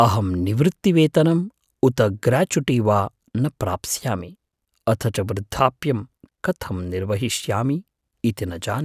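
Nothing stood out as a technical fault on listening to this speech clip.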